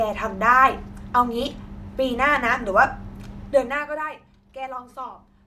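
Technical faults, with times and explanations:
No technical faults can be heard in this speech recording, with no disturbance to the signal.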